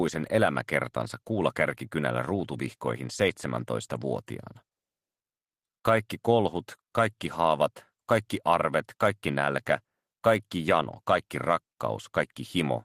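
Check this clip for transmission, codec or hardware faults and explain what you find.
No faults can be heard anywhere in this clip. There is nothing further to report.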